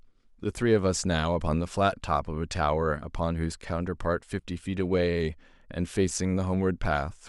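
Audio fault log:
No faults detected.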